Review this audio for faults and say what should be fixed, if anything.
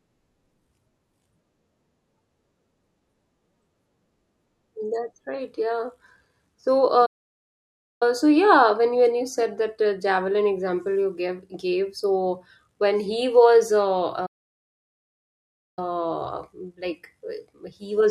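The speech cuts out abruptly twice, from 7.05 to 8.03 s (about 0.95 s of silence) and from 14.26 to 15.79 s (about 1.5 s), resuming at "so yeah when you" after the first gap. This is a playback stall, likely caused by the player running dry of buffered data or its audio thread being blocked, so output sat silent until feeding recovered. To prevent it, enlarge the playback buffer and keep the audio thread free of blocking work.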